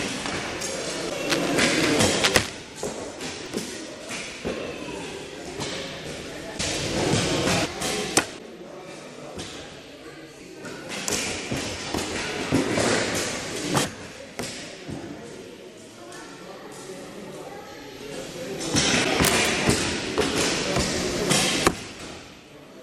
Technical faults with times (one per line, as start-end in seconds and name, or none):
1.09-1.12 broken MP3 bit reservoir
1.28-2.49 cable scratch noise
3.46 repeated buffer
6.57-6.60 broken MP3 bit reservoir
7.64-7.67 broken MP3 bit reservoir
8.37-8.40 broken MP3 bit reservoir
10.39-10.42 broken MP3 bit reservoir
13.83-13.87 broken MP3 bit reservoir
19.03-19.06 broken MP3 bit reservoir
19.23-19.48 cable scratch noise
21.98-22.01 broken MP3 bit reservoir